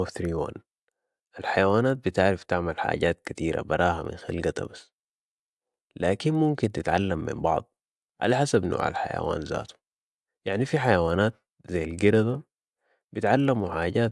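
Speech running through a resampler restarted on every block, converting 48 kHz to 24 kHz in 50 ms blocks. Each block edge leaves a small error, so a 20 Hz tick-buzz rides the voice throughout. Unlike mains hum, it stops in pauses.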